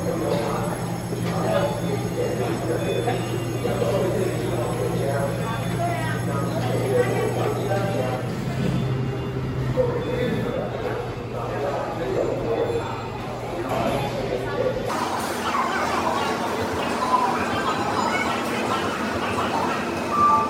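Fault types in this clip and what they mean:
Audio read two samples at a time (double speed): from 14.89 s to the end, sample pairs are taken as single frames, so the sound runs twice as fast and an octave higher; a spectrogram shows features doubled in frequency, halved in duration.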